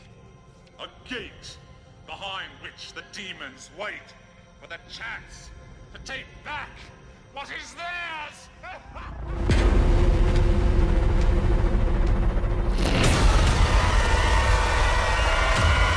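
Nothing goes wrong anywhere in this recording; there's no technical fault to point to at any moment.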